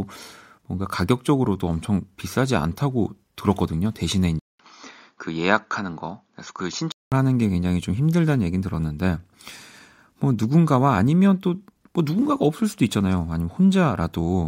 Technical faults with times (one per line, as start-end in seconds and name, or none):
4.39-7.12 input switched to a poorer device